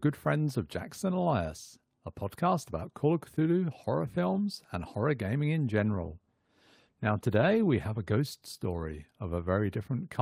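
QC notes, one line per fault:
5.81–8.51 s, call bitrate drop: speech turns rough and coarse, consistent with the encoder falling from about 32 to 18 kbps, then clears as bitrate recovers.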